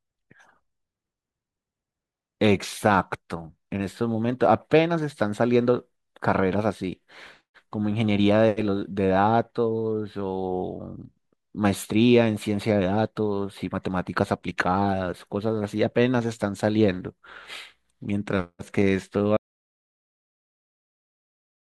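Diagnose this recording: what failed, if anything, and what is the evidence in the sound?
The speech cuts out at 19.37 s and stays in silence through to the end, with no room tone or tail at all. That's an audio dropout to silence: the input most likely dropped at the device or link stage, and the recorder kept writing silence.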